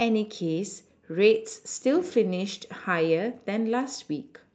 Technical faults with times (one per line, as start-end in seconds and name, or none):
none